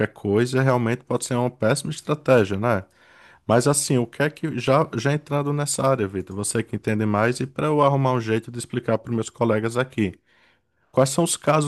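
Speech with four brief bursts of hard clipping at 0.69 s, 3.51–3.56 s, 7.87 s and 10.99–11.03 s, where peaks overran the signal path's ceiling by about 1 to 2 dB and were cut flat. These sound like crackles. The waveform shows squared-off peaks, and the spectrogram shows faint vertical smears of high harmonics.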